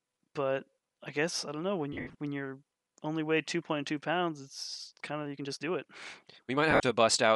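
Throughout the clip, the speech has likely passed through Bluetooth LC3 compression, with damage that is plainly audible. The transform codec works in short blocks, which fits 10 ms frames, and at a rate that points to around 48 kbps it discards much of the upper spectrum and fills it with synthetic noise. Consonants and the top of the voice take on a grainy, breathy fizz instead of clean detail.

From 1.93 to 2.15 s, between "I don't know when" and "when you're only weigh", LE Audio frames were lost. About 160 ms of audio went missing, scattered across 220 ms, with the longest gap around 70 ms. Each time, the decoder recycled the previous spectrum with scrambled phase, so the voice briefly dissolves into a noisy, hissing smear before clean frames resume.

From 5.14 s, right after "pounds it's", to the end, a time-stretched section begins, likely software squeezing the audio to fit a length by dropping short slices. 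Playback runs about 1.35 times faster while the pitch stays put, so the delivery suddenly sounds rushed.

Inside that sped-up stretch, from 6.71 to 6.83 s, lost LE Audio frames strike again. Roughly 90 ms dropped out over 120 ms, with runs up to around 50 ms, and concealment again turns the voice into a brief, grainy noise smear.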